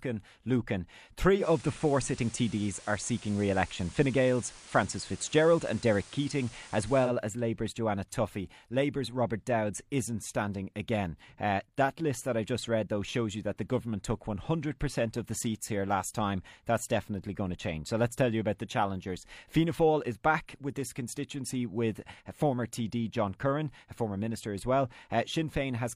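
From 1.36 s to 7.12 s the speech shows digital radio blending to analogue: the receiver lost the digital stream and cross-faded over 105 ms to the FM broadcast. The level shifts by about 3 dB, and hiss sits roughly 25 dB below the speech.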